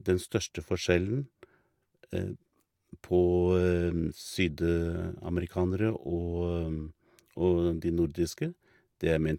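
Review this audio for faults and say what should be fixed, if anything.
Two devices on unsynchronised clocks, likely drifting apart by around 200 ppm, drop or repeat one sample roughly every tenth of a second. The result is clock slip clicks: a faint, regular ticking from 0.13 s to 9.34 s, about 70 ticks in all. Locking both devices to a shared word clock, or resampling at the handoff, would prevent it.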